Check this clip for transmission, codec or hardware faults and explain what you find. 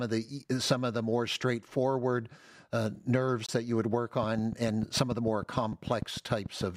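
Two faults are present in the speech: a brief silent gap and, later, a steady ticking.

Gap between stream segments, 3.46–3.49 s, between "more straightforward uh nerves" and "that you would work": segment timestamps leave a 26 ms hole filled with silence, which fits 2.0 s segments. It appears as a hard-edged blank column on the spectrogram and a flat line in the waveform.

Train of clicks, 4.23–6.62 s, starting after "that you would work": about fifteen similar pulses at a regular 6.72 per second, about 10 dB above the signal, likely from electrical interference. They sound like even ticking and show as evenly spaced full-band vertical lines and sharp waveform spikes.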